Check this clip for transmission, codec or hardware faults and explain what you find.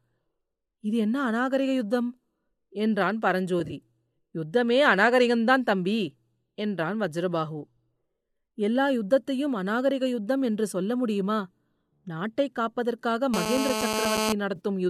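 Two kinds of fault are present: AAC frame loss with concealment, twice, and GSM phone buzz near the end.

AAC frame loss with concealment occurs first from 3.60 to 3.73 s. About 50 ms of audio is missing, scattered across 120 ms, in runs of roughly 20 ms at most. That pattern fits the short 10 ms frames of the low-delay AAC the speech is likely carried on. The decoder patches each gap from the last good spectrum. So the speech turns briefly smeared and phasey rather than dropping out. A second loss at 14.56 to 14.60 s removes 40 ms. It gives the same noisy, blurred texture.

GSM phone buzz runs from 13.34 to 14.33 s. A 2G phone in a call nearby transmits bursts about 217 times a second. The audio circuitry rectifies those radio pulses into sound. The result is a hard, raspy buzz at 217 Hz, rich in harmonics. It is nearly steady throughout. It bears no relation to the speech. It sits at about 2 dB below the speech level, so it is nearly as loud as the speech itself.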